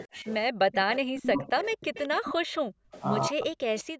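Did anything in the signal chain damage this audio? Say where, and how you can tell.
Yes, the damage happens at the call-processing stage, in the echo canceller.

Speech suppressed in double talk shows up three times. From 0.07 to 0.26 s the level dips slightly. From 1.25 to 1.56 s it sags by about 15 dB. From 3.29 to 3.98 s it drops deeply, by around 40 dB. Each dip falls where far-end sound is also present. The likely cause is the canceller failing to separate the near talker from the loudspeaker echo, so it attenuated both together.

Background gated by the echo canceller appears from 0.56 to 0.67 s and again from 2.37 to 2.92 s. In both spans the room tone falls away by about 40 dB and then snaps back. This is the canceller pulling the microphone down hard while the loudspeaker was active and releasing it once playback stopped. The abrupt silence gives it away, because it sounds like a gate rather than a natural pause.

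An echo leak runs from 0.72 to 2.33 s as a delayed copy trailing the speech by 209 ms, about 10 dB below it. Weaker scraps follow at 2.93 to 3.02 s, about 20 dB down, and at 3.79 to 3.83 s, about 25 dB down. The constant 209 ms lag identifies it as loudspeaker pickup, likely left behind by incomplete cancellation on the loudspeaker side and sent back into the call.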